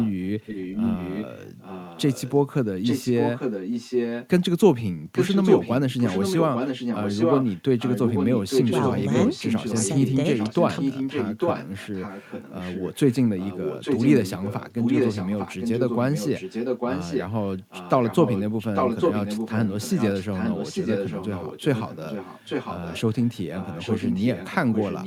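It's a speech recording with an echo leak running through nearly all of it: from 0.0 to 2.39 s, 2.82 to 4.28 s, 5.14 to 17.27 s and 17.7 to 25.06 s. A second copy of the speech trails the original by 850 ms, only a few decibels quieter. That's likely a far-end speakerphone whose echo canceller isn't catching what its microphone picks up and sends back.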